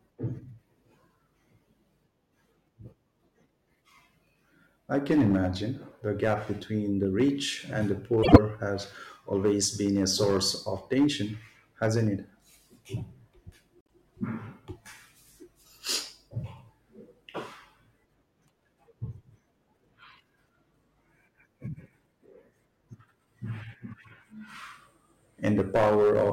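Speech recording where the signal was driven about 11 dB past what the chain could pass, so hard clipping flattens the peaks of roughly one percent of samples, adding a harsh crackle throughout. Frames out of order also occur twice, where neighbouring runs of frames were swapped before decoding. From 8.23 to 8.38 s, between "the rich and the" and "has always been a", two 52.2 ms blocks trade places. From 13.81 to 13.91 s, two 26.1 ms blocks swap. Both pattern sizes fit frames of about 26 ms. The swaps produce a short garbled flutter, and no time is lost.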